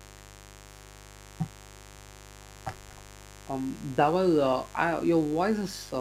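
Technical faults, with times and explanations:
Throughout, mains buzz: a steady, raspy buzz sits roughly 20 dB below the speech. It comes from sharp switching spikes at twice the 50 Hz mains rate, so the interference forms a dense series of 50 Hz harmonics extending up to several kHz.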